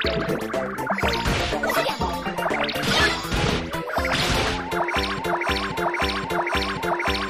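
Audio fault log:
5.19 s to end: broken-record loop, a 0.53 s fragment repeating exactly four times back to back, likely from a stalled player or stream resending its last piece.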